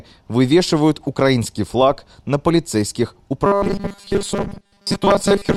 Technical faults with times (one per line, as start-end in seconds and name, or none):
3.46-5.56 robotic sound from repeated short buffers